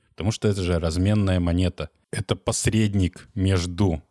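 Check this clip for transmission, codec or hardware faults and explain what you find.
Nothing stood out on listening to this speech recording.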